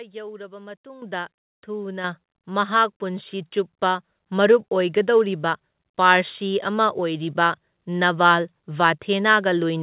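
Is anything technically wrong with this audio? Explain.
Yes. The microphone volume gets stepped up three times: at 1.02 s by about 10 dB, at 2.04 s by about 5 dB, and at 4.08 s by about 2 dB. The call software decided the input was too quiet and raised the device gain in discrete jumps, so speech and background get louder together, abruptly, mid-stream. The band-limited, nothing-above-4 kHz sound is just the G.711 call path.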